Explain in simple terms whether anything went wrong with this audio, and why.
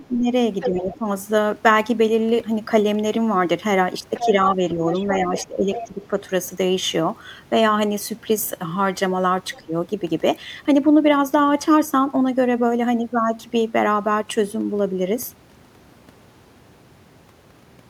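Three times in this speech recording, the main talker's voice is turned down while a second voice is heard: from 0.0 to 1.04 s, from 4.2 to 6.16 s, and briefly from 9.57 to 9.73 s. This is speech suppressed in double talk. Both sides spoke at once, and the call's echo canceller most likely could not tell the talker apart from the loudspeaker sound, so it lowered everything. The dip is strongest around 4 to 6 s.

The second voice is the other side's voice leaking through. The talker's loudspeaker plays the far end, and the microphone picks part of it up again. The echo canceller likely failed to remove all of it. It is fairly noticeable from 0.61 to 0.98 s, weaker from 4.14 to 5.84 s, and barely audible from 9.53 to 9.61 s.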